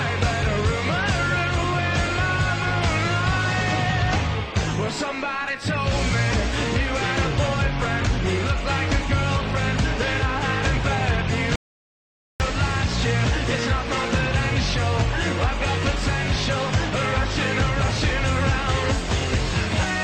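At 11.56 s the sound cuts off mid-flow and resumes at 12.40 s: an audio dropout to silence lasting 0.84 s. The gap is silent with no room tone, unlike a natural pause or noise gate. The input was likely lost while recording continued.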